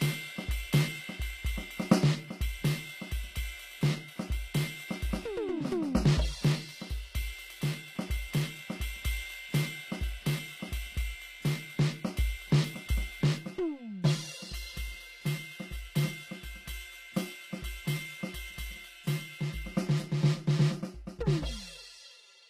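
HE-AAC compression runs throughout the music, with plainly audible damage, and it is the likely cause of the gritty, metallic treble. Only the lower spectrum seems to be coded; the upper range is rebuilt by copying lower bands upward and shaping them with a coarse envelope. That rebuilt top sounds synthetic, its harmonics don't line up across the crossover, and nothing sounds above 15.5 kHz, which points to a low bitrate around 24 kbps.

Channel delay (comb filtering) sets in at 13.39 s and lasts to the end at 22.50 s. One channel arrives roughly 5 ms late, and when the two are summed to mono, material common to both cancels at evenly spaced frequencies. The first notch falls around 100 Hz, with further notches repeating up the spectrum, so the music turns hollow and phasey.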